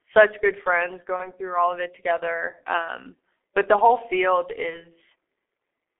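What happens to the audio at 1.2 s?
Between "good friends" and "through all of it", from 1.16 to 1.30 s, there is VoIP packet loss concealed by the speech codec. One 30 ms frame went missing, and the decoder filled the gap by extrapolating its last pitch and filter settings at reduced gain. The result is a stretched, buzzy tone or a coloured noise that fades. Because each frame depends on the one before, the signal stays weak or distorted for some time after packets resume.

Underneath this, as throughout the clip, is the G.723.1 codec at 6.3 kbit/s on a 300 to 3.5 kHz line band. Its coarse 30 ms framing and slow voice-model updates cause heavy damage, leaving the speech muffled and hoarse with smeared consonants.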